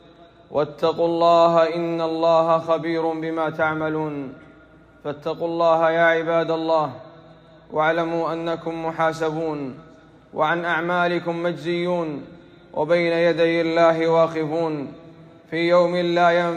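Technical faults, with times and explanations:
Nothing stood out as a problem on listening.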